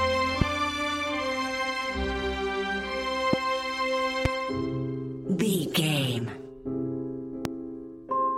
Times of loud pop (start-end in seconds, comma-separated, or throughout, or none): 0.41-0.44, 3.33-3.36, 4.25-4.28, 7.45-7.48